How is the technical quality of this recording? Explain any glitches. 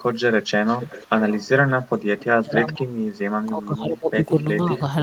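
The speech in this recording has two recurring call-path faults, echo leaking back and the talker being pushed down while the far side speaks.

Echo leak occurs from 0.66 to 1.47 s, 1.69 to 1.89 s, 2.18 to 2.25 s and 4.76 to 4.81 s. A faint delayed copy of the speech trails the original by about 488 ms. It is strongest in the first stretch, roughly 15 dB under the direct speech, and in the later scraps it falls to around 20 to 30 dB below. The likely cause is a speakerphone whose echo canceller let part of its loudspeaker pickup through, which was then sent back down the line.

Speech suppressed in double talk occurs from 2.41 to 3.0 s and from 3.46 to 4.3 s. The talker's level sags while the other side is speaking, dropping by about 25 dB at worst in the first dip and about 15 dB in the second. The dips affect about 0.5 s and 0.7 s of speech. This is likely an echo canceller that could not tell the local talker apart from loudspeaker echo and attenuated both together.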